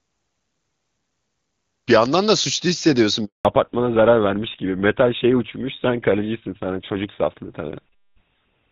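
A handover gap runs from 3.25 to 3.45 s. As the call switches networks, no speech frames arrive for about 200 ms, so the sound drops away abruptly and stays silent until the new link carries audio again. Whatever was said in that stretch is missing.

A fallback to narrowband follows at 3.45 s and lasts to the end. Before this point the audio has the clear, extended top of HD Voice, consistent with AMR-WB at 23.85 kbit/s. Afterwards nothing above 4 kHz remains, and the duller, rougher tone points to the older GSM full-rate codec at 13 kbit/s.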